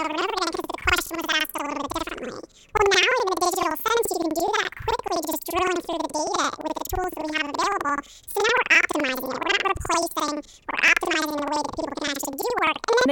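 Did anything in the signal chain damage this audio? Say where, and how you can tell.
Yes. Throughout, the speech plays an octave high with a fluttery stutter at about 11.7 Hz. This is planar audio read as interleaved at the sample-format conversion stage. Each 85.33 ms block, which fits a 4096-sample buffer, plays its left channel and then its right at double speed.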